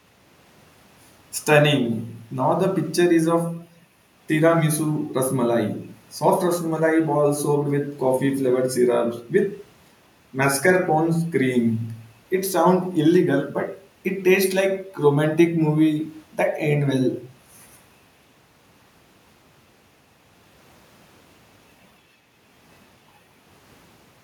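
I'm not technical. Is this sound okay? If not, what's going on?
Yes, this speech recording is okay, with no technical faults to be heard anywhere in it. Nothing drops out, jumps or breaks up along the way, so there's nothing here that needs fixing.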